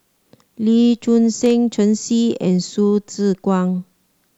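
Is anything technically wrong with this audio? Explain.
Yes. From 1.42 to 1.50 s the speech is broken by a short, irregular burst of crackle and scratching lasting about 80 ms, with the signal stuttering in and out rather than simply getting noisier. This is loose connector crackle: a worn or dirty contact in the cable or jack momentarily loses and regains connection as it shifts, chopping the audio into fragments, while any DC present on the line turns each make and break into a pop.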